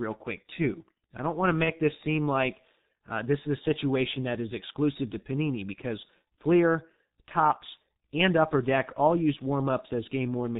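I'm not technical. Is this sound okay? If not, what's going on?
No. Throughout, the speech has the sound of the G.723.1 codec, an old internet-phone system that squeezes speech hard. It's heavily damaged: muffled, with nothing above 4 kHz, plus a hoarse roughness and smeared consonants. A plain phone line would sound dull but not gritty like this.

From 1.64 to 1.75 s, just after "I don't want to" and before "this seem like uh", there's VoIP packet loss concealed by the speech codec. The gap fits a single lost 30 ms chunk, and the decoder papered over it by guessing and stretching the sound into a brief buzzy or noisy, weakening patch. Unlike a clean dropout to silence, it keeps sounding and stays distorted a little past the gap.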